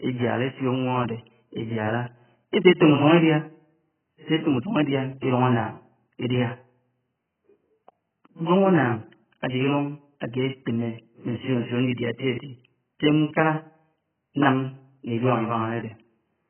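Speech throughout carries heavy damage from AAC compression, likely AAC-LC at a very low bitrate around 9 kbps. Nothing survives above 3.1 kHz, and the remaining band sounds smeared and warbly, with fizzy sibilants. That warble sets it apart from a simple low-pass filter, which would only dull the sound.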